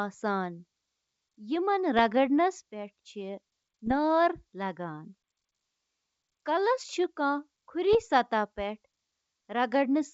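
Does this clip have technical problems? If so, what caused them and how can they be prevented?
Yes. Bit errors on an ADPCM link cause pops and rough bursts at 1.99 s, 3.86 to 3.94 s and 7.93 to 7.97 s. Each flipped bit corrupts the decoder's step size and predictor, so the damage rings on briefly. This wideband G.722 call's coding is clean apart from these errors. Prevent this with a cleaner radio or transmission link, plus error detection that conceals damaged frames.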